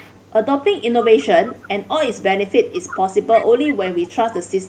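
An echo leak recurs at 0.0–0.31, 0.81–1.26, 1.48–1.68, 2.19–2.31, 2.49–3.47, 3.67–3.74, 4.02–4.15 and 4.45–4.68 s. A faint-to-fairly-strong copy of the speech trails it by 340 ms, likely from an echo canceller passing loudspeaker pickup. On a spectrogram it shows as fainter, shifted repeats of the harmonic striations.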